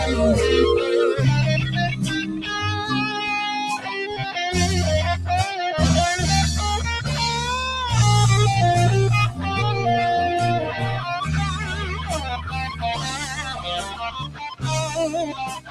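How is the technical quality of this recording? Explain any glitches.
The technical quality is compromised by a speech-oriented processing stage left active on material it was never meant for.

A noise suppressor applied to music or sounds runs through the whole recording. The suppressor treats anything steady, such as sustained tones, ambience or reverberant decay, as background noise and keeps pulling it down, so the level rides up and down by roughly 10 dB. Onsets pass largely intact, but what follows them is pressed down, giving a pumping, fluttering, thinned-out quality throughout.

There are also three stretches of sound cut by the noise suppressor, where the suppressor misjudged material as noise and attenuated it harder than the rest. The first is brief, from 2.22 to 2.56 s, dipping by about 7 dB. The longest runs from 11.58 to 14.64 s, and the last from 15.29 s to the end, both sinking by about 14 dB at their deepest. 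In each, sustained or fading sound sags audibly and tails are clipped short.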